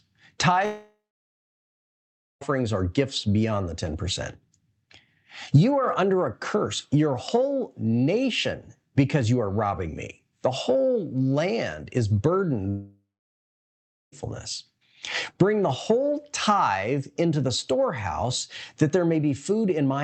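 At 0.65–2.43 s and again at 12.69–14.14 s the speech is replaced by a brief fading buzz or hiss, then about 1.45 s and 1.1 s of silence, likely a long network dropout. Roughly 1.76 s and 1.44 s of audio are lost before the call resumes.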